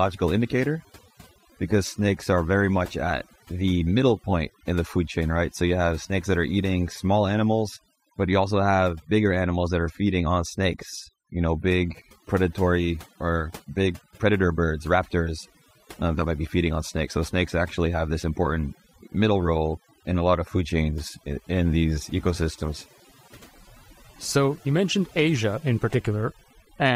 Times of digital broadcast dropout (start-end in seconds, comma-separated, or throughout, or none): none